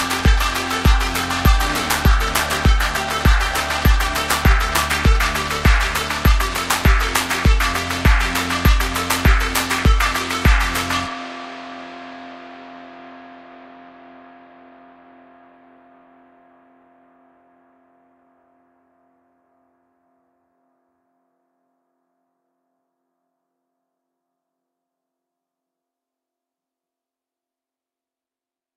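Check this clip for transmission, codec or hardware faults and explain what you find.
No transmission, codec or hardware faults are audible anywhere in this audio.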